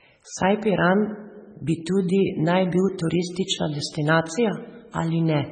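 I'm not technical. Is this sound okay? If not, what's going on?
No. Throughout the speech there are heavy MP3 compression artefacts, most likely from saving the file at a very low quality setting. To save space, the encoder threw away everything above about 9 kHz, so the voice lacks its crisp top end. It also dropped quieter details that flicker in and out moment to moment, giving a watery, swirly sound with metallic chirps on s sounds and blurred starts to syllables.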